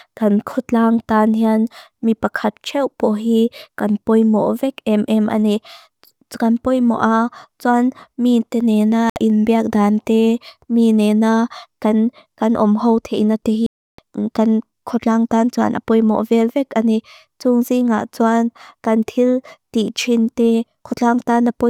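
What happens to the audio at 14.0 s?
Right at 14.0 s the speech is just coming back from a Bluetooth dropout that runs from 13.66 to 13.99 s. For about 320 ms the sound goes completely silent. It likely happened because audio packets failed to reach the headphones in time and were discarded. The speech then resumes further along, as though it had kept playing underneath. On a waveform this shows as a flat-line gap with abrupt or briefly faded edges, and a spectrogram shows a clean vertical band of empty energy across all frequencies.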